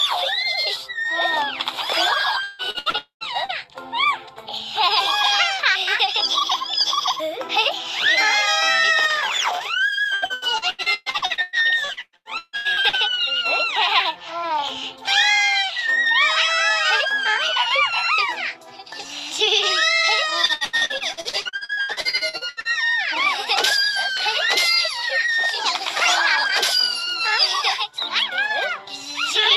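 Packets went missing again and again at 2.43 to 3.52 s, 10.14 to 12.96 s and 20.46 to 22.68 s. This repeated packet loss makes the audio choppy and robotic, with roughly a third to half of each stretch filled in. Within the first burst, from 2.98 to 3.24 s, the sound smears into a fading buzz or hiss and then drops to about 0.12 s of silence, likely a long network dropout.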